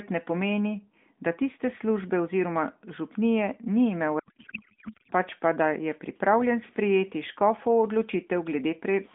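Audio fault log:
4.20–5.12 s, codec payload misread: for just under a second the speech turns into garbled noise and warble that barely tracks it. The receiving side seems to be unpacking the AMR frames in the wrong layout, likely octet-aligned payloads read as bandwidth-efficient, so the fields land in the wrong places.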